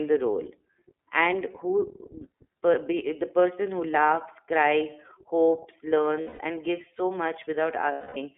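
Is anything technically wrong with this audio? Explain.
Yes, two related problems.

The whole clip has gone through the iLBC codec, a narrowband VoIP coder, and the damage is plainly audible. The band runs from roughly 300 Hz to 3.6 kHz, so there's no top end at all. Each frame's excitation is coded on its own, and the rough, slightly synthetic edge fits the 13.33 kbps mode with 30 ms frames. The speech stays clear, but it sounds thin and a bit rough throughout.

There are also lost iLBC frames, at 6.21 to 6.40 s (about 180 ms) and 7.92 to 8.17 s (about 240 ms). When packets went missing, the decoder filled in by repeating the last pitch cycle mixed with noise and fading it out. Each gap comes across as a held, breathy, faintly buzzy vowel. Because iLBC frames don't depend on each other, the voice snaps back almost straight after each one.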